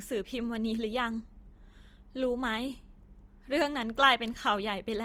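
Across the whole speech clip the sound is rough and grainy rather than swirly: sustained tones dissolve into a noisy texture, and plainly audible codec damage sits on every phrase, though the band still reaches up to about 20.2 kHz. This is likely Opus compression in its CELT music mode, which, short of bits, fills bands with folded or noise energy, consistent with a rate around 24 kbps.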